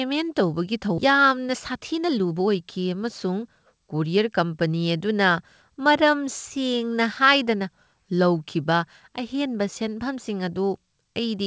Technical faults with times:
0.98-1.00 skip ahead
1.10-4.41 jitter buffer speed-up

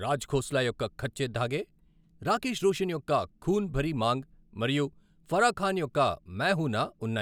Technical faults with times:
none

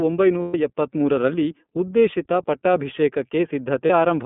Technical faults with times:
0.00-4.26 iLBC codec
0.42-0.54 lost iLBC frames
3.86-3.90 lost iLBC frames

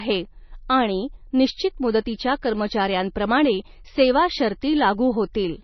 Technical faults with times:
0.00-5.63 MP3 compression

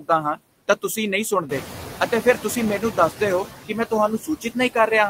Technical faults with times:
0.00-5.09 noise suppressor artifacts
0.00-0.09 speech cut by the noise suppressor
1.49-1.90 noise suppressor catching up
3.66-3.92 speech cut by the noise suppressor
4.19-4.57 speech cut by the noise suppressor

